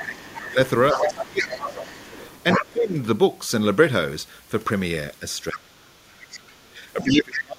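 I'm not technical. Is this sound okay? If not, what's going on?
No. There are two problems, both on a call where the other person's voice is played through a loudspeaker.

The first is the other side's voice leaking through. From 0 to 2.65 seconds, and again from 6.2 to 7.4 seconds, a second voice can be heard behind the main one. It is likely that the echo removal missed part of the loudspeaker sound.

The second is speech suppressed in double talk. From 0 to 2.97 seconds, and from 5.2 seconds to the end, the main voice dips and drops out in places. It fades much more in the later stretch. This is likely because both people spoke at once, so the system turned everything down.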